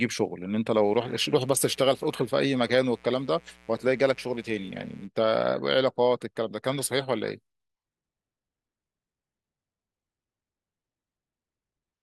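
From 0.70 s to 5.09 s a mains buzz runs beneath the speech, a steady raspy drone sitting roughly 30 dB below it. Switching spikes from a 60 Hz supply leak in twice per cycle, so a spectrogram shows evenly spaced horizontal harmonic lines stacked well into the kilohertz range.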